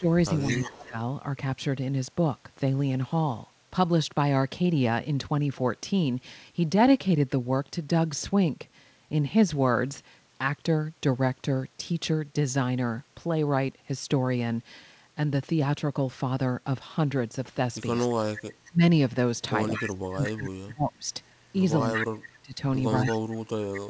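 From 0.0 to 0.96 s the voice dips by about 15 dB for roughly half a second in total. This is speech suppressed in double talk, likely caused by the echo canceller turning down the near talker along with the far-end echo while both sides spoke. Unlike a network dropout, the voice is turned down by the canceller rather than lost in transit.

Within that stretch, from 0.38 to 0.85 s, a copy of the voice trails it by 217 ms at about 10 dB below the speech. This is echo leak, likely residual loudspeaker pickup that got past the canceller. It differs from room reverberation in being a distinct, delayed repeat rather than a smooth tail.

The leak returns at 17.98 to 18.72 s, quieter at about 20 dB down. From 18.15 s to the end, suppression deepens to about 30 dB. Through that section echo scraps recur at 19.74 to 19.91 s, 21.94 to 22.15 s (strongest, about 5 dB down), and 23.06 to 23.8 s, each with the same 217 ms delay. 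The G.722 path caps everything at 8 kHz.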